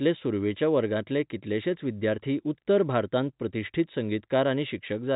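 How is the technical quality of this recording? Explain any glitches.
There are no glitches to explain in this speech recording. It carries the narrow sound of G.711 telephone coding, with nothing above 4 kHz and only a faint, level-following hiss from the 8-bit logarithmic scale.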